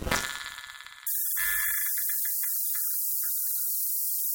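From 1.07 s to the end at 4.35 s, you get low bit depth with noise shaping: only 4 bits, with the rounding error pushed up toward the treble. It comes across as a steady, thin hiss, climbing hard up top, at roughly 10 dB relative to the signal.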